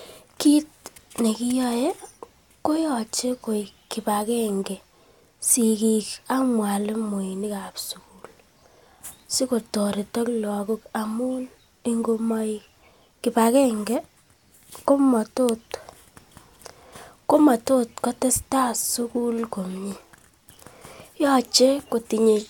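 Speech recording with no technical faults to report.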